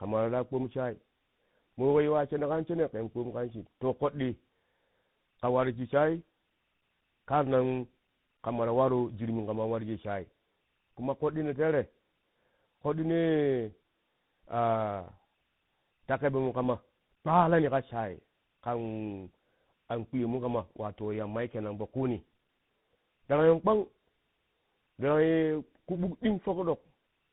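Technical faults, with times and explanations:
Throughout: tandem speech coding. The speech sounds like it passed through two speech coders in series, one like GSM full rate and then a CVSD-style delta modulator. Each re-codes the previous one's errors, compounding the roughness and warble, with nothing above 3.8 kHz.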